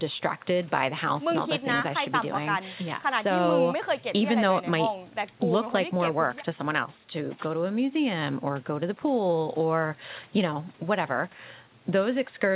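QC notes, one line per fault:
No faults: the signal carries nothing above 4 kHz, as expected from a narrowband call codec on the call path, and shows no dropouts, clicks, clipping or level jumps.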